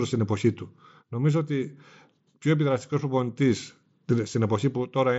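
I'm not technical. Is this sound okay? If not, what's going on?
Yes, nothing stood out when listening to this speech recording, which came through a Bluetooth headset.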